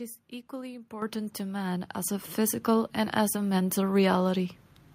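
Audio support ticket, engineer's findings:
Microphone volume stepped up at 1.02 s: abrupt level rise of about 9 dB, speech and background noise floor jumping together. Probable component: call software's automatic input-gain control. It judged the mic too quiet and raised the device input volume in one step.

Second microphone volume step-up at 2.04 s, about 5 dB, same signature. Cumulative rise about 14 dB within roughly one second. Stepwise rather than smoothed adjustment points to device-level volume writes, not a gradual gain stage.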